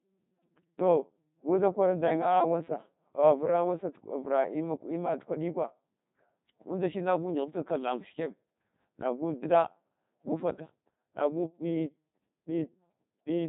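Speech carrying Codec 2 vocoder damage throughout: buzzy, robotic resynthesis from sine waves, heavy degradation, nothing above 3.8 kHz, which fits a 2.4 kbit/s mode. Unlike waveform codecs' warbling or smearing, the voice's natural waveform texture is gone entirely.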